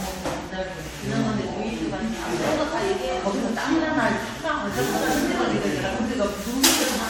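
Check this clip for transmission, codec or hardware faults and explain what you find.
One codec fault runs through the whole clip: generation loss. The audio sounds swirly, smeared and hollow, with blurred attacks and nothing above 19.3 kHz. The likely cause is repeated AAC-LC re-encoding, about seven passes near 96 kbit/s. Each pass re-quantises on a shifted frame grid, stacking noise and spectral holes.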